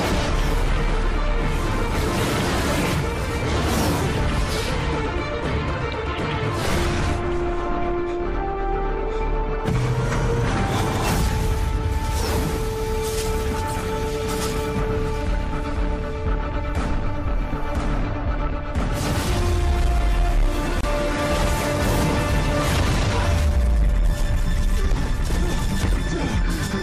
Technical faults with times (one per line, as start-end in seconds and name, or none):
20.81-20.83 gap at a join of encoded pieces